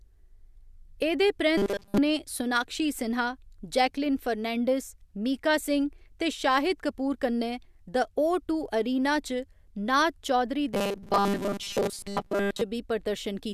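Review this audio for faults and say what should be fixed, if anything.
Audio most likely arrived too seldom at two points, 1.58 to 1.98 s and 10.73 to 12.61 s, so the playback side kept repeating a short buffer, roughly 5 ms long, while most of the real speech was skipped. The result is robotic sound from repeated short buffers: a rigid, metallic buzz locked at 200 Hz that only loosely tracks the speech. Keeping the audio feed steady with adequate buffering prevents it.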